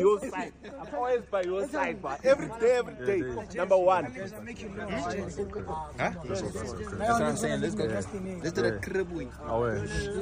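No technical faults can be heard anywhere in the recording.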